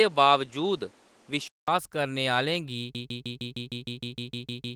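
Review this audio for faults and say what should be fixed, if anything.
From 0.0 to 1.68 s the speech has nothing above 11.4 kHz and carries its own hiss, about 35 dB down, before a 200 ms silence and a return to full-band sound at the same level. The likely cause is an input switched to a poorer device. The separate noise floor and the gap are what distinguish it from a simple low-pass filter. Locking the input device for the whole session prevents it.

From 2.95 s to the end, a 154 ms fragment repeats identically 12 times in a broken-record loop, and the audio that should have played there is lost. It is likely a stalled player, encoder or stream resending its last buffer. Unlike an echo, the repeats never decay or overlap. Larger buffers and stall detection that mutes rather than repeats would prevent it.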